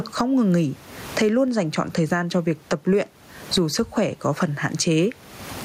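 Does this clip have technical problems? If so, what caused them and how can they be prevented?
Yes. Gain pumping runs through the whole clip. The input gain was likely set far too high, so a fast limiter clamps down on every loud syllable and swings the level by some 25 dB. The room noise sits about 39 dB below the speech, and the speech comes out flattened and squashed. Setting a lower input gain and using a gentler, slower compressor prevents it.

At 1.48 s there is a DC step. The waveform's zero line jumps to a new offset and then drains away through a high-pass filter near 2 Hz. It is heard as a single low thump while the speech carries on unchanged. Blocking DC at the input and avoiding recalibration or input switching during recording prevents it.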